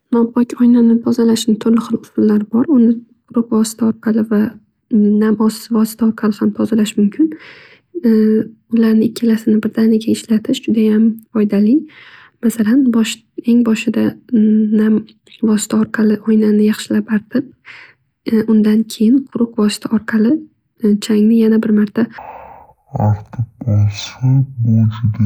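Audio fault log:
22.18 to 25.26 s: stereo read as mono. Left and right samples are taken in turn as one channel, so the speech plays at half speed and an octave low.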